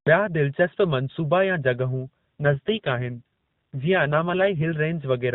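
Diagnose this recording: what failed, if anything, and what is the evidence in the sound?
The failure is an AMR rate drop at the codec, forced by the network. From 2.40 s to 4.77 s the speech turns rougher and more synthetic, then recovers. The band stays at the same narrowband 4 kHz ceiling and there is no gap. That combination points to the link adapting: the AMR-NB coder fell from its 12.2 kbps mode (light coding damage outside this span) to a lower mode, around 5.9 kbps, and gave the freed bits to error protection.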